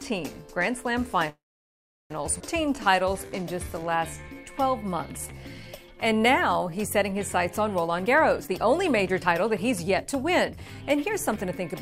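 From 1.29 to 2.12 s the sound stops and a brief tail of the last sound carries on, fading within a few tens of milliseconds into about 0.73 s of silence. This is a call audio freeze, likely caused by packets stalling in transit until the jitter buffer ran dry. About 0.81 s of delay was inserted, and nothing was lost. On a spectrogram the harmonics smear into a short decaying band and then a blank column before the sound resumes exactly where it left off.

Between 2.38 and 2.42 s there is a skip ahead. Roughly half a second of audio is gone, and the material on either side is butted together through a tiny 16 ms bridge. It sounds like an abrupt jump forward in the middle of the sound, with no pause. In the waveform the envelope changes suddenly with no gap, and on the spectrogram the formant or harmonic patterns jump discontinuously at a vertical seam.

From 2.62 to 7.15 s a jitter buffer slow-down stretches the audio to about 88% speed, adding 542 ms in total. 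The receiver was building a reserve by repeating single pitch periods and slices of pauses over and over. The pitch stays put while sounds drag and occasionally warble slightly. A spectrogram shows harmonics elongated horizontally at unchanged frequencies, and the waveform shows runs of near-identical repeated cycles.

From 7.84 to 11.61 s the opposite happens, a jitter buffer speed-up running at about 121%. With too much audio queued, the receiver trimmed out short chunks of one or a few pitch periods many times in a row, removing roughly 0.7 s. The pitch is unchanged but the sound comes across as hurried and compressed. On a spectrogram, events sit closer together and steady segments are shortened. The waveform shows cycles spliced with occasional small discontinuities.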